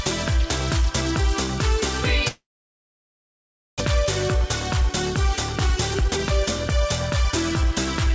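The audio passes through a call path that holds nothing above 8 kHz, which fits a G.722 codec. From 2.28 s to 3.82 s the sound stalls. The last sound smears into a brief fading buzz, then about 1.4 s of silence follows. This is likely a long network dropout. About one second of audio never returns, and the delay grows by roughly half a second. From 4.05 s to 6.72 s a jitter buffer speed-up runs. The receiver trims short pitch-period slices to drain that backlog. Playback runs at 110% with unchanged pitch, so it sounds hurried. About 0.3 s is removed in all.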